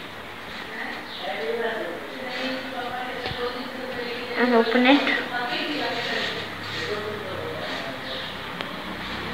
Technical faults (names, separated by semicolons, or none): none